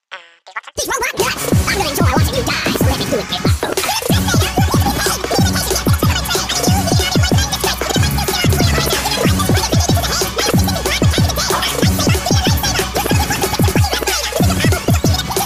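No technical faults can be heard anywhere in the recording, and the signal stays steady and intact throughout.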